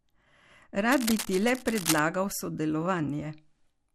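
Speech throughout carries the dull, gurgling, granular texture of MP2 compression, with upper bands cutting in and out and the remaining ones coarsely quantised. That is likely a low-rate MPEG Layer II encode, and the damage fits something near 80 kbps. It differs from the separate burbling event because it is steady and present the whole time. From 0.89 to 1.99 s a dense, uneven scratching and rustling sits only a little below the speech, which points to cable scratch noise from a worn connector or control being moved. Its broadband, irregular bursts separate it from codec artefacts, which stay tied to the signal's spectrum. Between 1.79 and 1.83 s, inside that scratch, a brief burst is DAB burbling. Residual bit errors corrupted a few MP2 frames there, so short blips of noise appear in single sub-bands. It is band-limited rather than broadband.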